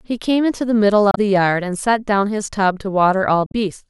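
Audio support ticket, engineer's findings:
Speech clip. Two short blips at 1.11–1.18 s and 3.46–3.55 s. Damaged data in a compressed stream. Corrupted bytes make the decoder misread frames there, lose sync, and resume at the next valid frame header.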